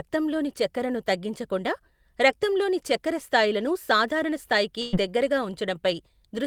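A speech clip with a burst of packet loss from 4.81 to 4.95 s, right after "రక్తంలోని చక్కెర స్థాయిలను సాధారణ". For about 110 ms the receiver extends the last sound, fading it, then playback resumes with roughly 120 ms of speech missing.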